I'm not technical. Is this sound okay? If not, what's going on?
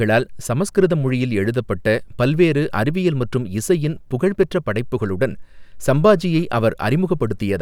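Yes, no faults heard.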